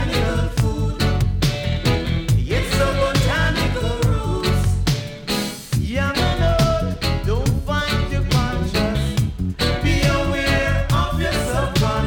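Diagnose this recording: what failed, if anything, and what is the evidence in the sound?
Nothing failed; no stage leaves any audible trace.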